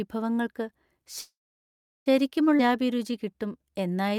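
At 1.21 s the speech stops and does not resume until 2.08 s, a call audio freeze lasting about 0.85 s. The last sound carries on briefly as a fading buzz or hiss before dropping to silence for roughly the final 0.73 s of the gap. The likely cause is packets held up in transit, so the jitter buffer ran dry and the receiver could only extend what it last had. When the audio returns it picks up exactly where it left off. Nothing is lost, but playback now runs about 0.85 s later than before.

Half a second later, at 2.58 to 2.61 s, there is a skip ahead. Playback jumps forward with almost no gap, only about 10 ms of fill. Roughly 0.4 s of speech is missing, and the material on either side is spliced nearly directly. This cuts the delay by around 0.4 s.

Immediately afterwards, from 2.61 s to 4.15 s, a jitter buffer slow-down sets in. The speech runs at about 89% of normal speed with unchanged pitch, stretched by 177 ms in total. 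Sounds come across drawn out. The receiver is repeating individual pitch periods and slivers of pauses to rebuild its reserve.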